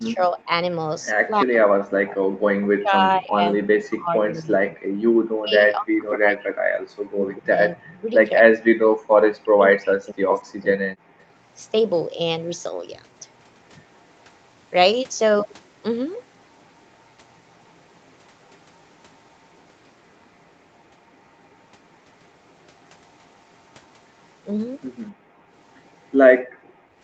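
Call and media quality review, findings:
Speech suppressed in double talk: voice dips about 15 dB at 0–0.5 s, then chops in and out 1.29–10.89 s, down as far as about 40 dB. Likely the AEC ducking near-end while far end talks.

Background gated by the echo canceller: room sound drops hard, about 32–36 dB, at 11.15–11.19 s, 25.12–25.5 s and 26.42–26.9 s. Canceller clamps the mic during loudspeaker playback, then releases.

Echo leak: faint delayed copy of the voice at 11.19–11.24 s and 26.63–26.73 s, roughly 240–250 ms behind, about 35–40 dB down. Residual loudspeaker pickup likely slipping past the canceller.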